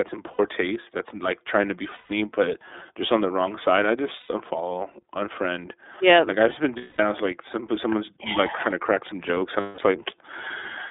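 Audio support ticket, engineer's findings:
iLBC codec on the path throughout, consistent with the 13.33 kbps, 30 ms frame mode. Band limited to roughly 300 Hz to 3.6 kHz, nothing above 4 kHz. Plainly audible coding damage makes the speech thin, slightly rough and synthetic.

Lost iLBC frames: packet loss with decoder concealment at 0.33 to 0.40 s (before "taste that's like trying"), 1.94 to 2.11 s, 4.20 to 4.29 s, 6.77 to 7.00 s (after "like I've just been", before "I was like some") and 9.60 to 9.79 s (after "to crack some jokes"). Gaps of 60, 150, 90, 210 and 180 ms, which fits runs of two to seven 30 ms frames. The decoder repeats the last pitch cycle with added noise, fading on the longer gaps, so each one sounds like a held, buzzy vowel. Speech is clean again almost immediately after each gap.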